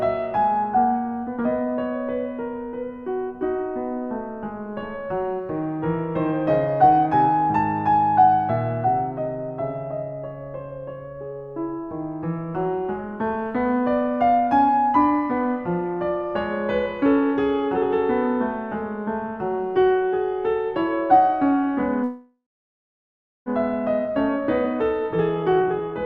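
At 22.03 s the music breaks off and the last sound is stretched into a fading buzz or hiss that falls to silence for roughly 1.06 s before playback resumes at 23.49 s. This is a call audio freeze, likely from delayed packets emptying the jitter buffer. About 1.43 s of delay is inserted and nothing is lost.

From 24.09 s to 25.95 s a jitter buffer speed-up follows. The receiver trims short pitch-period pieces repeatedly to shed the accumulated backlog, removing about a fifth of a second. The music plays at 111% speed at unchanged pitch, so the tempo audibly rushes.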